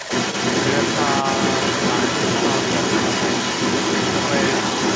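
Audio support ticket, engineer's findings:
Other side's voice leaking through, 0.00–4.96 s, entire clip. Second voice present throughout, about 5 dB louder than the local talker. Likely cause: far end played on loudspeaker, acoustic echo canceller leaving a large residual in the mic signal. Band-limited call path, nothing above 8 kHz, which fits a G.722 wideband link at 64 kbps. Check AEC convergence and device loudspeaker volume.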